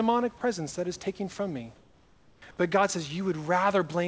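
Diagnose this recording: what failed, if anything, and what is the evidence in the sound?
Call processing stage: sound dropped by the voice detector. At 0.38 to 0.41 s, just before "that is taking from", a 30 ms span is replaced by comfort noise, losing 20 ms of speech, likely a voice detector misfire.

Call processing stage: comfort noise in place of the background. From 1.76 to 2.42 s, after "is taking from me", the room background turns flat and featureless, about 4 dB quieter, likely synthetic fill during a transmission pause.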